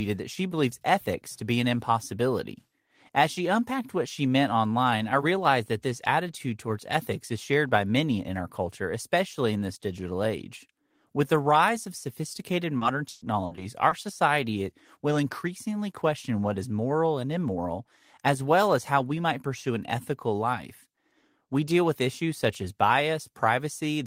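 Repeated packet loss (robotic sound) runs from 12.77 to 13.93 s in this speech clip. Audio kept dropping out in short bursts, up to 120 ms each, and each hole was patched by extending the preceding sound, so about a fifth of the stretch turns choppy.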